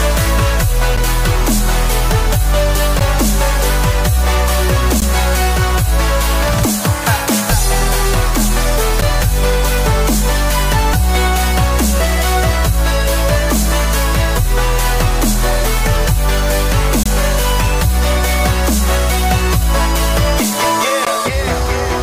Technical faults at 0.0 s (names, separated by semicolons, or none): none